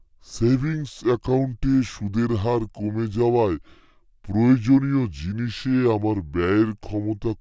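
From start to end, a wrong sample rate makes the speech low and sluggish. It plays at 0.73 times speed and 5.55 semitones down, together rather than pitch alone, which fits 22 kHz audio played at 16 kHz.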